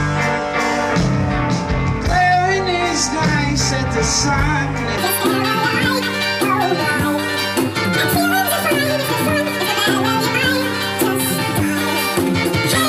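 From 4.98 s through to the end at 12.89 s, the audio plays as a section at the wrong speed, running at 2.0 times its recorded rate, likely because a player or editor fitted it to the wrong clock. Pitch and tempo jump together at that moment: the sound turns high and hurried, raised by roughly ten semitones. On a spectrogram, every band and harmonic steps upward and spreads apart while events squeeze into half their width. The waveform shows tighter cycles and shorter bursts.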